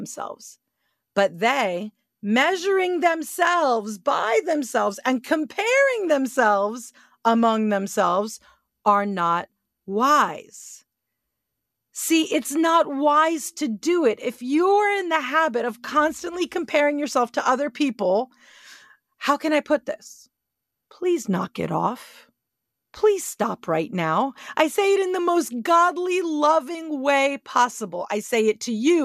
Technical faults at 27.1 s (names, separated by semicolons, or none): none